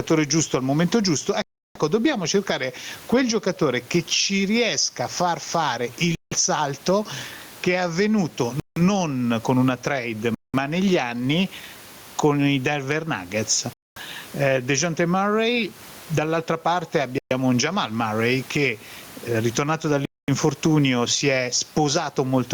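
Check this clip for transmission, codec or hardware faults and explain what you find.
Two faults are audible in this speech: gain pumping across the whole recording, and seven short dropouts that are likely Bluetooth stalls.

Gain pumping runs from start to finish. The input gain is most likely set far too high for the microphone, so a fast limiter or compressor clamps down on every loud syllable and releases in the pauses. The level swings by around 15 dB. The room noise sits about 35 dB below the speech, and the speech sounds squashed and flat in dynamics.

The Bluetooth stalls occur at 1.42–1.79 s, 6.15–6.33 s, 8.60–8.81 s (just after "salto che è avvenuto"), 10.35–10.55 s (between "con una trade" and "negli anni"), 13.73–13.97 s, 17.18–17.32 s and 20.05–20.29 s (after "che eh ritornato"). Each stall is likely caused by interference holding up packets, which lets the headphones' buffer run dry. 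Playback stops dead for about 125 to 334 ms, then resumes. The speech breaks off abruptly and returns without a fade.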